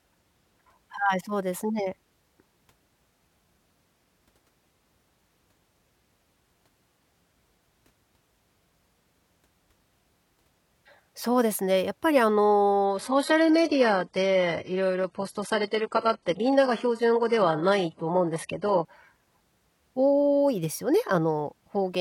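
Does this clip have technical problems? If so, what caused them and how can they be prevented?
Yes. From 12.85 to 18.85 s the speech suddenly turns dull, losing everything above 11.5 kHz, because an adaptive stream at a lower bitrate was playing. Setting a higher minimum bitrate or buffering further ahead would prevent this drop.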